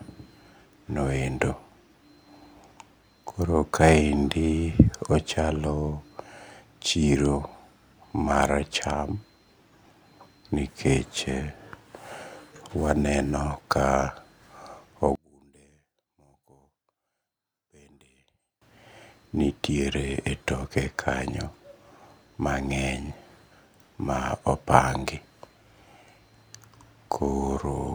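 From 15.15 to 18.62 s the speech drops by about 34 dB and turns faint, with the centred voice almost gone. The likely cause is one channel inverted: with one stereo side in reversed polarity, the shared signal cancels when the channels are summed to mono, leaving only their small differences. On a waveform the envelope collapses to a sliver for that span, and a spectrogram shows the energy nearly erased.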